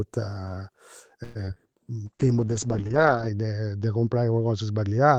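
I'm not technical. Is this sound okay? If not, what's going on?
No. From 1.23 to 1.60 s there is repeated packet loss (robotic sound): four brief dropouts, the longest about 118 ms, were patched by stretching the previous sound. That makes it choppy, with bits actually missing rather than just blurred.

From 2.06 s to the end there is a call bitrate drop: the connection forced much coarser encoding, so the sound turns rough, watery and muffled, losing its crisp top above about 8 kHz. Unlike the earlier fault, nothing goes missing. It just sounds duller throughout.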